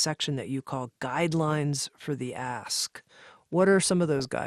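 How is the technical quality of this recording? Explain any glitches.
The technical quality is compromised by audible codec damage throughout, plus two short error bursts.

Throughout the speech, there is a dull, granular, plainly audible gurgling character, likely caused by MP2 compression at a low bitrate, which fits about 80 kbps. Starved sub-bands switch off or are coarsely quantised.

From 0.48 to 0.60 s, just before "call guidelines for the", and again from 4.19 to 4.25 s, DAB burbling appears as brief bursts of noise blips. Residual bit errors corrupt the audio data in five frames each time, putting short blips of noise into single sub-bands.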